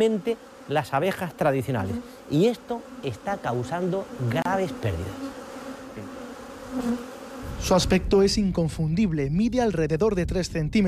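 At 4.42 s a gap at a join of encoded pieces cuts into the sound. It lasts about 32 ms, until 4.45 s. The audio was encoded in separate pieces, which seem to be about 6 s long. They were then joined without trimming. Each encoder run leaves its start-up delay and the padding of its last frame in place. The result is a brief silence whose edges are smeared by the codec. The sound then resumes exactly where it stopped.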